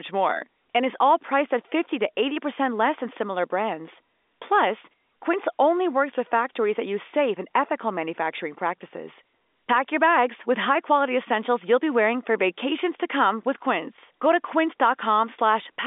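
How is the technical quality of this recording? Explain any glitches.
No glitches can be heard in this speech recording. It has passed through G.711 telephone coding, so the sound sits in a telephone band of about 250 Hz to 3.6 kHz with nothing above 3.8 kHz, which fits an A-law line.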